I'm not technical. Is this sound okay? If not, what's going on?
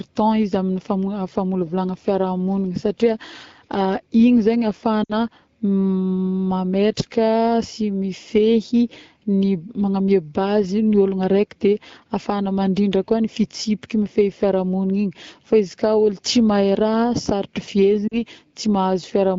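No. At about 5.04 to 5.13 s and again at 18.08 to 18.18 s the speech briefly dips toward near silence before the voice comes back, weak or rough for a moment. These are lost AMR speech frames. Over the phone's radio link, small chunks of speech were damaged in transit. The decoder filled each gap by repeating its last good sound while turning it down. The gaps are short, roughly 60 and 40 ms, which fits a few lost 20 ms frames each time.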